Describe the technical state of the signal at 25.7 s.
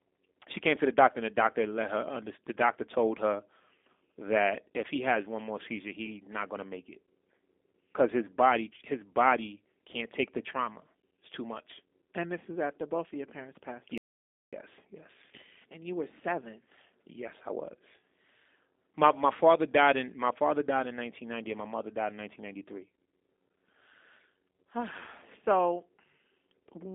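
At 25.7 s the speech sounds slightly rough and synthetic, with a plainly audible buzzy, processed edge and no brightness above about 3.6 kHz or weight below 250 Hz. This is G.729 codec damage, present throughout the clip. The sound points to an 8 kbit/s G.729A coder that rebuilds each 10 ms frame from a vocal-tract filter, a pitch predictor and a few pulses rather than the waveform itself, on a narrow telephone band.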